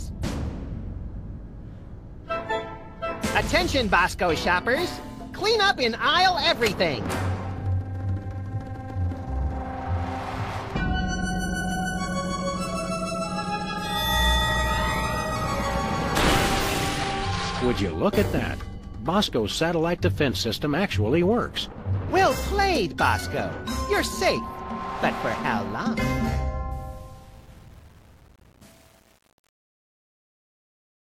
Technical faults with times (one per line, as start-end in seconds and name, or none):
26.72-31.13 truncation distortion on a fade